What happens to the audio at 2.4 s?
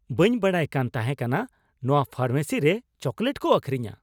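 Nothing goes wrong at 2.4 s; the speech carries on intact through that moment.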